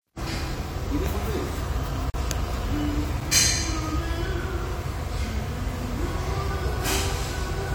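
At 2.10 s the audio drops into a block of digital silence for about 40 ms, running to 2.14 s, and it's long enough to hear as a short hole. Then at 3.20 s there's a second one, only about 6 ms, which comes across as a single tick. In both cases the output most likely got zeros because its buffer wasn't filled in time, so the sound cuts out and back with no fade.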